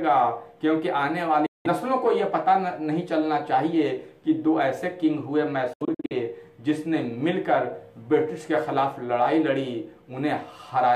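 At 1.46 s the sound cuts to silence until 1.67 s. From 5.73 to 6.13 s it breaks into several short holes, the longest about 70 ms. Each time it resumes further on, as if it kept playing. This is likely a Bluetooth dropout, with late packets dropped before reaching the headphones.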